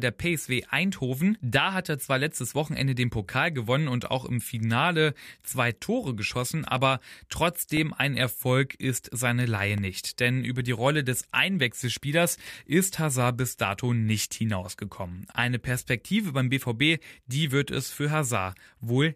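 From about 5.77 to 10.78 s there's a run of periodic USB or driver dropouts: something keeps stalling the audio path once a second, and each time roughly a millisecond of speech vanishes into silence. You hear it as a steady string of small ticks, somewhere around seven.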